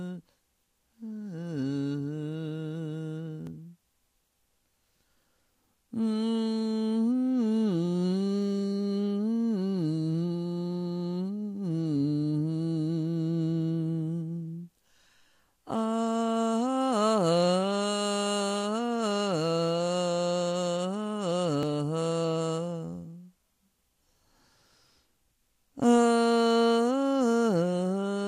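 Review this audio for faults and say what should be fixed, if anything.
A small jump in the sound at 3.47 s and 21.63 s, likely a dropped buffer (overrun), losing a few milliseconds each. Prevent it with larger capture buffers and higher-priority audio threads.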